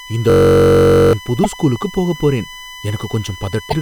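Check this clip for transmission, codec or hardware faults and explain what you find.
Three faults are present in this speech clip: USB whine, a system hang loop, and damaged data in a compressed stream.

USB whine runs throughout: a fixed tone at 1 kHz, loudest at its 2 kHz harmonic, roughly 15 dB below the speech. It comes from bus-frame current leaking through power or ground.

A system hang loop runs from 0.30 to 1.13 s, just before "புது ஸ்கூலுக்கு போகப் போறேன்". A 21.33 ms fragment repeats 39 times as a 46.9 Hz buzz, which fits a 1024-sample buffer replaying while the system stalled. About 0.7 s of audio is lost.

Damaged data in a compressed stream appears at 1.44 to 1.46 s, just before "ஸ்கூலுக்கு போகப் போறேன்", and again at 3.66 to 3.74 s. Each is a brief glitch where the decoder misreads corrupted frames and resynchronises.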